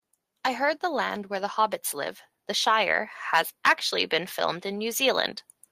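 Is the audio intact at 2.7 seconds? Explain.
No. At 2.7 seconds the speech sits inside an automatic gain rise running from 0.58 to 3.09 s, where the gain control, judging the input too quiet, lifts its level by about 4 dB. Voice and background swell together, so the waveform envelope widens steadily and the spectrogram brightens evenly across all frequencies.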